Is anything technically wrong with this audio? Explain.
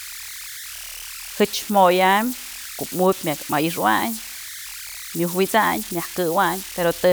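Yes. Converter idle tones run throughout: an undithered delta-sigma converter falls into repeating bit patterns, leaving a whistle near 2 kHz about 14 dB below the speech.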